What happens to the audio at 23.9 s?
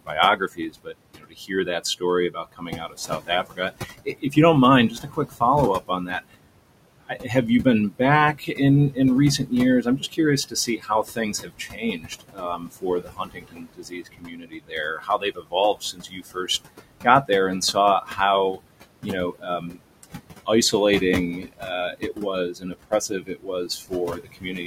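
At 23.9 s the speech is cut by the noise suppressor: from 21.4 s to the end, it mistakes quiet speech for noise and lowers it by up to about 21 dB, leaving roughly a second and a half of swallowed, faint sound. Noise suppressor artifacts also run through the whole clip, with the room noise pulled down by about 21 dB between phrases, so the remaining background pumps up under the voice.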